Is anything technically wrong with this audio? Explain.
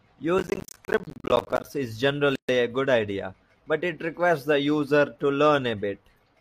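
Yes, there are two faults.

From 0.38 to 1.65 s there is processor overload crackle. The system could not finish its small audio buffers in time, and dozens of deadlines were missed back to back. Each miss drops a short slice to silence with hard edges, and the rapid chain of them turns into a gritty crackle over the speech. The spacing fits buffers of roughly 10 ms. Unlike a single dropout, this is a sustained burst of many tiny holes, and it stops once the load eases.

At 2.35 s a gap at a join of encoded pieces opens and lasts 132 ms, to 2.49 s. The audio was encoded in separate pieces and joined without trimming, so the encoder's start delay and end padding sit between them as silence. This fits pieces about 6 s long. It differs from the crackle because it is one clean, continuous hole with smeared edges, after which the speech resumes exactly where it stopped.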